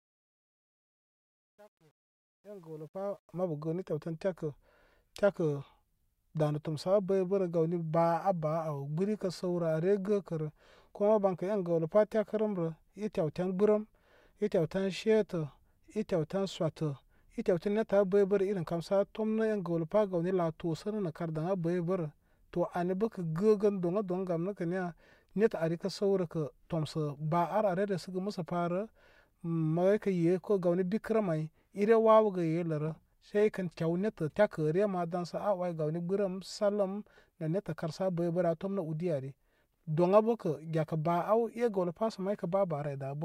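The fade-in stage keeps too few bits and adds no dither, which fits 10-bit precision, causing truncation distortion on a fade from 0.0 to 3.44 s. Until 2.84 s the quiet speech turns gritty, before the fade-in completes at 3.44 s.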